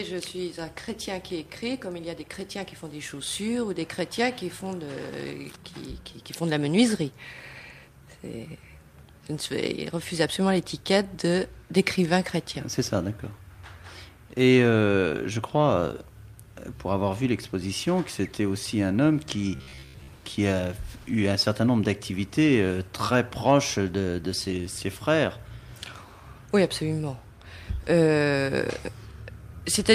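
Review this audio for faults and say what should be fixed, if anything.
From 19.55 to 20.08 s the sound collapses into a rigid, metallic buzz at about 66.8 Hz, a fixed pitch that only loosely tracks the material underneath. This is robotic sound from repeated short buffers, likely caused by audio arriving too seldom, so the playback repeats a roughly 15 ms slice, which fits that buzz frequency, and skips most of the real audio over that half-second. To prevent it, enlarge the playback buffer and make sure the audio source delivers data on time.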